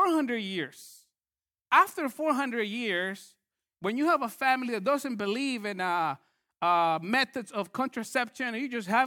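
No technical faults can be heard in this speech clip.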